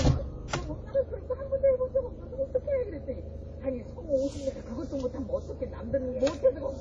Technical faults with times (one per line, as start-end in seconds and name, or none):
0.00-6.81 transcoding between lossy codecs
2.64 block of digital silence
3.65 block of digital silence